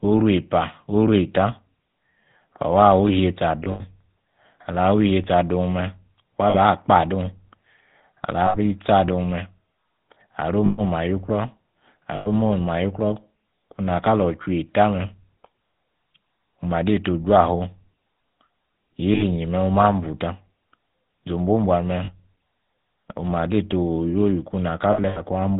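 The whole clip carries the GSM full-rate codec, at 13 kbps. The speech has a buzzy, gravelly roughness, and the damage is plainly audible. This codec models the vocal tract and excites it with sparse regular pulses, so fine detail is lost. Nothing above 4 kHz gets through, which leaves the speech dull and narrow.

Lost GSM frames then break the speech at eight points: 3.64, 6.50, 8.46, 10.66, 12.16, 19.14, 22.04 and 24.92 s. Each time, the decoder repeats the last good frame. The sound sticks briefly as a rough, metallic ring. The gaps last 40 to 160 ms, which fits runs of two to eight 20 ms frames. At 3.64 s, 120 ms of loss is scattered over 200 ms. At 24.92 s, 160 ms is spread across 240 ms. In both, the longest single hold is about 70 ms.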